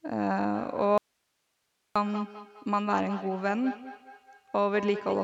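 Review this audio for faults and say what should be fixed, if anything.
A feedback echo between two devices runs from 0.54 s to the end. Each syllable returns about every 200 ms, peaking at about 12 dB below the speech, because a second device in the room replays the call and its microphone feeds it back. On a spectrogram, each burst has fainter, thinner copies trailing at regular spacing. To prevent it, mute or remove the second device from the call, or use headphones on one of them.

An audio dropout to a faint residue occurs from 0.98 s to 1.96 s. The sound cuts abruptly and leaves only hiss about 50 dB below the signal for 0.98 s. The likely cause is the signal being lost upstream while the downstream path stayed open. On a waveform, this appears as a flat near-silent band with sharp edges, and on a spectrogram as a block of uniform low-level noise. To prevent it, secure the input connection and check the capture path for interruptions.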